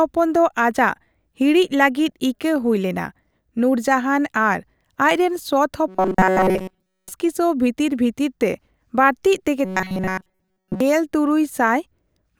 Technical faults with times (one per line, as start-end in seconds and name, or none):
5.88-7.12 robotic sound from repeated short buffers
9.65-10.80 robotic sound from repeated short buffers